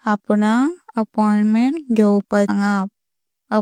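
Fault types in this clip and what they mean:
Stream segment skipped: at 2.45 to 2.50 s the speech jumps abruptly with a small blip, likely because one stream segment failed to load and playback continued.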